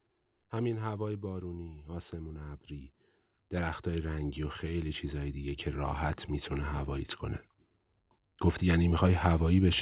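From 0.51 to 2.98 s, automatic gain rising lifts the level by about 6 dB, then again from 3.5 to 7.15 s by about 7 dB, and once more from 8.6 s to the end: the control judged the input too quiet and eased its gain upward. Speech and background noise swell together, which shows as a slowly widening waveform envelope and brightening spectrogram below the call path's 4 kHz ceiling.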